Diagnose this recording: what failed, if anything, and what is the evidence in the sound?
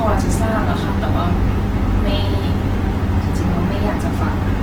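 The codec stage is at fault. Across the whole speech clip the sound is plainly grainy and rough, with tonal parts of the voice turned noisy, yet the spectrum stays full, with content reaching about 20.1 kHz and no muffled narrowing. The likely cause is Opus compression in its music (CELT) mode at a starved rate, consistent with roughly 16 kbps. The encoder preserves band energies and fills what it cannot code with folded or noise content. That yields this texture rather than the swirling holes MP3 leaves.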